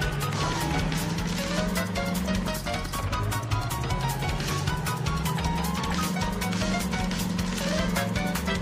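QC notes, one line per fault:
No faults to note.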